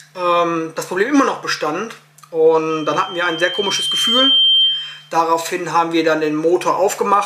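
Loudspeaker feedback squeal runs from 2.70 s to 5.12 s. A microphone is picking up the loudspeaker it drives, and at 3.1 kHz the loop gain goes above one, so that single frequency keeps feeding on itself. The tone swells over roughly a second and a half into a piercing whistle that ends up a few decibels louder than the rest of the sound, then stops at 5.12 s.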